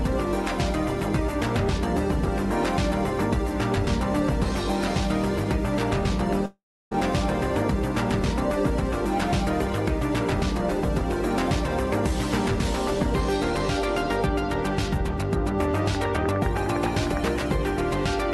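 A long network dropout runs from 6.46 to 6.93 s. The sound stops and is replaced by a fading buzz, leaving about 0.32 s of near-silence. When the audio resumes, roughly 0.46 s is simply gone, most likely because packets never arrived during a network stall.

A train of clicks runs from 15.95 to 17.29 s: about fifteen near-identical pops at a regular 9.8 per second, peaking around 5 dB above the sound. Likely cause: electrical interference or a faulty connection or power supply injecting pulses, audible as steady ticking.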